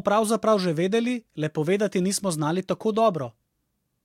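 Listening to this speech recording, nothing technically wrong stood out.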